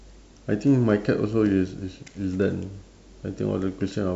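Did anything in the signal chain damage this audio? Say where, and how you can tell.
No, nothing in this speech recording stood out as damaged by any stage of the signal chain on listening.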